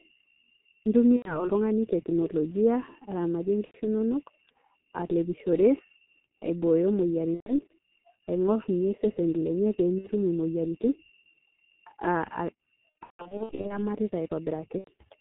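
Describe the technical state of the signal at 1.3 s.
At 1.3 s you're inside a VoIP packet loss concealed by the speech codec, running 1.16 to 1.48 s. The decoder stretches its last pitch and filter, so the speech turns into a buzzy tone or coloured noise and fades before recovering. Under that sits the G.723.1 codec throughout, at 6.3 kbit/s with heavy damage: nothing above 4 kHz, a slow-updating voice model, muffled, hoarse tone and smeared consonants.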